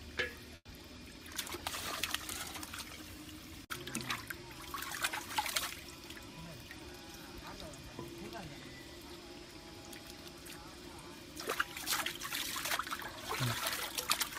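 At 0.55 s a brief fading buzz into near-silence holds for about 0.12 s, then the sound resumes intact: a call audio freeze, likely from delayed packets draining the jitter buffer.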